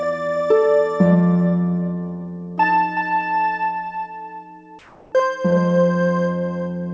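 From 4.79 to 5.12 s the detailed background gives way to a steady, featureless hiss about 3 dB quieter, likely comfort noise in place of the background. Unlike a noise gate or dropout, the gap is filled rather than silent, and the real texture returns with the sound.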